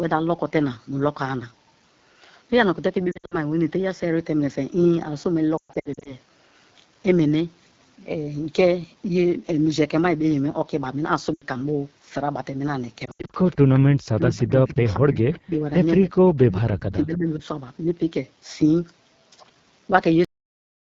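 Throughout, the speech carries the rough, raspy texture of the AMR wideband (HD Voice) codec at one of its lowest rates, which fits roughly 8.85 kbit/s. At that rate the pulse-driven vocal tract model has too few bits, so consonants and voiced sounds come out coarse and buzzy.

Lost AMR speech frames occur at 3.11 to 3.35 s, 5.58 to 6.15 s, 11.34 to 11.45 s and 13.05 to 13.31 s. The decoder bridges the missing frames by repeating the last pitch and vocal tract settings at falling gain. Scattered gaps give brief warbles and dips. The longest run, about 120 ms in the 5.58 s stretch, smears and fades before the voice returns rough.

A faint echo leak appears at 13.44 to 13.56 s, 14.88 to 14.93 s and 16.02 to 16.33 s. In each, a weak copy of the speech follows about 180 ms behind, at a low level well under the main voice. The likely cause is a far-end echo canceller failing to remove all of its loudspeaker pickup.

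Speech suppressed in double talk affects 14.14 to 15.52 s, 15.95 to 16.01 s and 16.46 to 17.44 s. The voice is pushed down in patches, at deepest by about 30 dB. This likely comes from the echo canceller attenuating everything while both sides were talking.

The audio has a cut-off end at 20.25 s. It drops straight to digital silence mid-sound with no natural decay, because the final buffers were never written.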